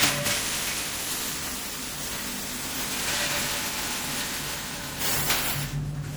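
Generation loss runs through the whole clip. The sound is swirly, smeared and hollow, and attacks are blurred. It likely comes from repeated MP3 encoding, around seven passes, each requantising on a shifted frame grid. The damage fits a 96 kbit/s chain.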